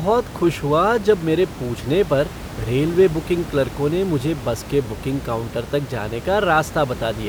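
No technical faults are audible in the speech, with only the room's own background noise sitting about 13 dB beneath it as part of the recording.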